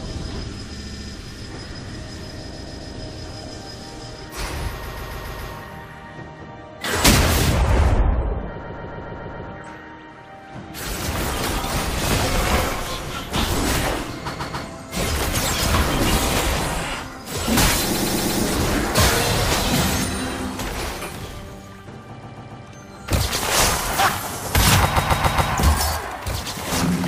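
Repeated frames at 0.78, 2.52, 4.82, 8.63, 14.34, 17.94, 22.21 and 24.95 s: compressed blocks of 70 to 140 ms are decoded again, two to six times, stuttering.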